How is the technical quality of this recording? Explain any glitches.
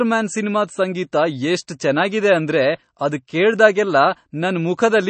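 Not great, honestly. The speech is clearly coded, and there's one small smear on an attack early on.

MP3 compression runs through the whole clip, and that's the likely cause of the dull, watery quality. Nothing comes through above about 8.3 kHz, so the encoder has chopped the treble at a hard ceiling. The damage is plainly audible and points to a starved bitrate of around 32 kbps. With that few bits, quieter frequency detail keeps dropping in and out between frames, which gives the swirly texture on sibilants.

There's pre-echo at 1.67 s. A sharp onset there lands late in a codec block, and the quantisation noise meant for the loud part gets spread back over the quiet moment before it. You hear roughly 13 ms of hiss just ahead of the attack, and the attack itself loses its edge and sounds a bit soft and smeared.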